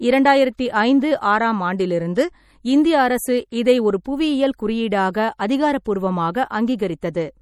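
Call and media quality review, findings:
MP3 compression, throughout: watery, swirling texture with metallic chirps on s sounds, smeared onsets, nothing above 18.8 kHz. Damage is plainly audible, which fits a bitrate around 48 kbps. Likely cause is a starved MP3 encode. Bits run short, so weak spectral lines are zeroed and flicker on and off between frames, and the treble is cut at a fixed frequency.

Pre-echo at 0.57 s, just before "ஐந்து ஆறாம் ஆண்டிலிருந்து இந்திய": 15 ms hiss ahead of the attack.
Pre-echo at 4.04 s, just after "இந்திய அரசு இதை ஒரு": 12 ms lead-in hiss.
Pre-echo at 5.85 s: 13 ms lead-in hiss.
Mechanism: quantisation noise spreads evenly across the transform block, so an attack late in the block fills the quiet gap before it with noise and the onset softens.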